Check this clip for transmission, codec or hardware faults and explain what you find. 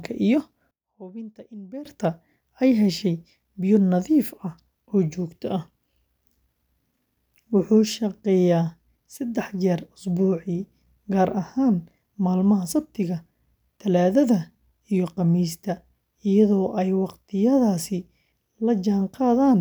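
One fault is audible, between 0.71 and 1.85 s. The speech falls by about 20 dB, which fits one channel inverted. Likely cause: one stereo side had its polarity flipped, so content common to both channels cancels when summed to mono. A waveform shows the envelope shrinking sharply for that stretch. A spectrogram shows the speech energy fading to a faint residue.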